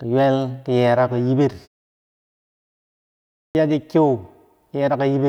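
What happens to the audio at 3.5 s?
At 3.5 s you get a clipped start after a pause. The speech resumes after about 1.9 s of silence, and the output path evidently dozed off during that gap and had to wake back up. The first 50 ms, from 3.5 to 3.55 s, get swallowed, so the word pops in abruptly out of nothing with its opening sounds missing.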